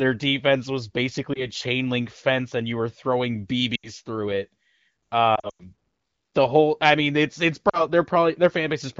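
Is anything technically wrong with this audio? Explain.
Yes. Lost AMR speech frames interrupt the speech at 1.34 s (after "defense was"), 3.76 s (after "and you were throwing"), 5.35 to 5.66 s, and 7.69 s (after "i mean it's it's"). Failed frames made the decoder repeat stale pitch and vocal-tract settings at falling gain, producing warbles and, in the scattered 5.4 s cluster, a brief fade. On a spectrogram the harmonics smear and then dim, and the waveform sags. The clear, wideband sound around these gaps fits AMR-WB near 15.85 kbit/s.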